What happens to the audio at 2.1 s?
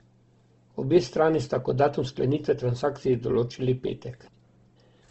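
At 2.1 s the speech carries the same grainy, rough texture that runs through the whole clip, with nothing above about 8.1 kHz. That's likely Opus compression in its music mode, where starved bands get filled with folded or noisy content, which fits a low bitrate around 16 kbps.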